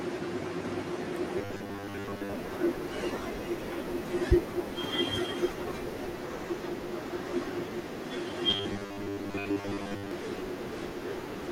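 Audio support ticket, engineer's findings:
Robotic sound from repeated short buffers, 1.38–2.33 s and 8.50–10.11 s. Speech becomes a rigid, metallic 100 Hz buzz. Likely cause: playback buffer starving, with roughly 10 ms segments looped over most of the audio. Spectrogram shows fixed harmonics at 100 Hz spacing; waveform shows identical repeating cycles.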